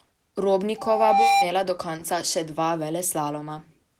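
From 0.78 to 1.48 s there's a loudspeaker feedback squeal. The mic is catching its own speaker, so a 793 Hz tone runs away, swelling over roughly half a second to sit a few dB above the speech. It stops just before "do konca še".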